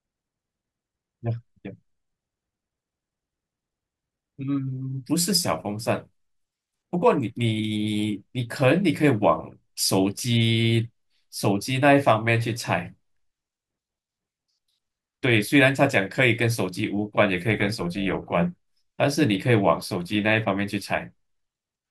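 Overlap-add ripple runs from 17.51 to 18.31 s. The speech was split into windowed frames and rejoined with overlaps that don't sum to a constant gain, so the level pulses by about 6 dB once per frame, at around 300 Hz, giving a metallic buzz with extra tones around the voice.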